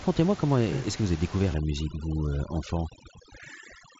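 From 1.54 s, after "que vous avez découvert", to the end, overdone noise removal cuts any frequency band near its noise estimate, quiet parts of the voice included. The room background drops and breaks up into twinkling specks.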